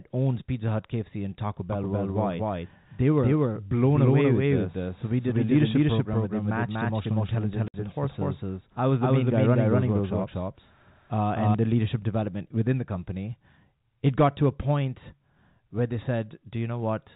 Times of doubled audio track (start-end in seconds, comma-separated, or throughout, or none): 1.73-11.55